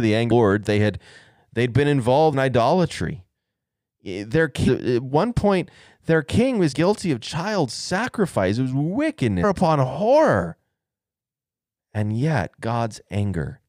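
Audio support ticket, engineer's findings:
Short glitches in the speech at 0.30, 2.32, 4.67–4.69, 6.71–6.73 and 9.43 s. Damaged data in a compressed stream: corrupt bytes make the decoder misread frames, lose sync and jump to the next frame header.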